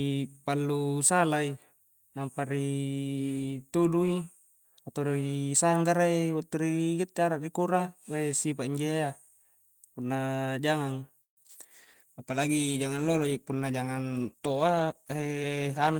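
At 11.21 s packets were likely held up and the jitter buffer ran dry, producing a call audio freeze: the last sound stretches briefly, then about 120 ms of silence, before resuming at 11.39 s with nothing skipped. Two short concealed packet losses follow, at 11.43 to 11.46 s and 11.48 to 11.51 s. About 20 ms of audio each time never reached the decoder and was patched by extrapolating the preceding sound, which gives brief smears. From 11.76 s to the end, a call bitrate drop cuts the encoder from 40 to 14 kbps, so the speech turns coarse, watery and dull. Between 14.25 and 15.44 s an overfilled jitter buffer triggers a speed-up, trimming roughly 150 ms of pitch periods, so the speech runs about 13% faster at unchanged pitch.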